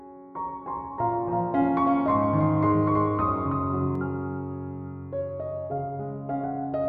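From 0.39 s to 3.95 s there's a doubled audio track: a dry, full-band copy trails about 300 ms behind, a few dB quieter, and cuts in and out abruptly, likely from a second, slower capture path.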